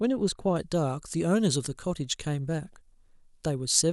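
From 0.56 s to the end, the speech carries pre-emphasis left on: treble lifted along what sounds like the FM 75 µs curve was never de-emphasised, leaving about 14 dB extra at 10 kHz relative to 1 kHz. Sibilants hiss and the sound turns thin and glassy.

Between 2.65 and 2.74 s, DAB burbling appears: bit errors slipped past error correction into the MP2 stream, putting short blips of noise into single sub-bands. The error rate behind it is below half a percent.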